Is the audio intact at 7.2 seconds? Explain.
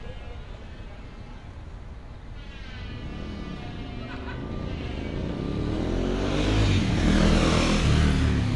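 No, at 7.2 s the audio carries MP3 compression damage throughout: treble stops at 11.3 kHz and weak detail swirls, likely from a low bitrate around 48 kbps.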